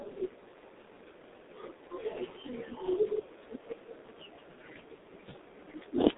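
G.723.1 codec damage runs throughout the speech, from start to finish. The sound points to this early internet-telephony coder at roughly 6 kbit/s, which works in 30 ms frames and rebuilds the voice from a coarse, slowly updated model. Here the band sits between about 200 Hz and 3.7 kHz, with nothing above 3.8 kHz, so the speech is muffled and thin. The heavy coding leaves it hoarse, with smeared consonants.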